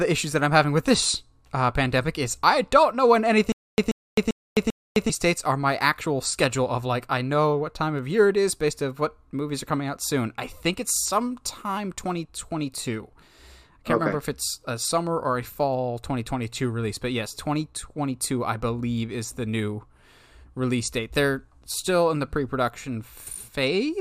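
A likely stream stall from 3.52 to 5.10 s causes stutter with silent gaps: a 134 ms burst repeats four times between 260 ms silences.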